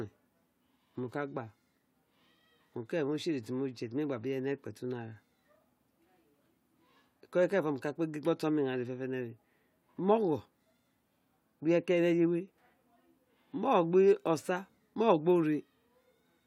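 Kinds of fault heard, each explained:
No kinds of fault are heard in this clip.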